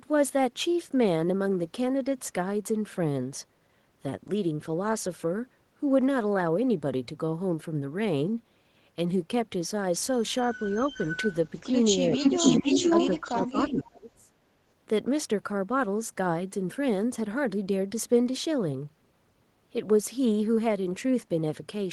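A speech recording with two linked call-path faults. An echo leak appears from 10.53 to 11.76 s and again from 12.14 to 13.82 s. A copy of the speech returns 465 ms late, first about 15 dB below the direct voice and then, in the second stretch, about 5 dB louder than it. The likely cause is a loudspeaker on the far end whose echo canceller let part of the played-back signal through its microphone. Speech suppressed in double talk overlaps these stretches. The direct voice dips by about 5 dB at 11.6–11.71 s and at 12.62–12.84 s, about 15 dB at 12.17–12.45 s, and about 10 dB at 13.05–13.35 s. The deepest cut, about 25 dB, comes between 13.51 and 14.32 s, affecting roughly 0.7 s. This pattern points to an echo canceller that likely could not tell the talker from the returning echo and attenuated both together.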